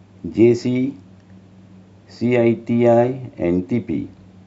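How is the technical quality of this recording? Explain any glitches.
Nothing to report: no audible glitches anywhere in the speech recording.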